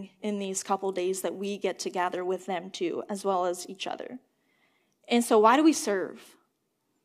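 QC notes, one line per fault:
No faults found.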